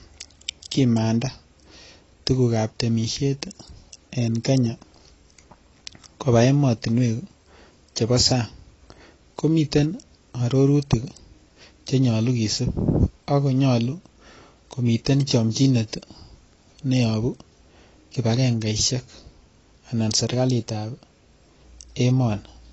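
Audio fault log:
Throughout, AAC compression: speech sounds dull and smeared with a warbling, fizzy edge on sibilants, and nothing reaches above 8 kHz. That fits a low bitrate, likely around 24 kbps.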